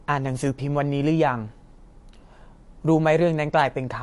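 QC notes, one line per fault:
Throughout: likely MP3 compression, consistent with about 48 kbps; treble cut above 11.3 kHz, watery swirl where weak frequency lines switch on and off.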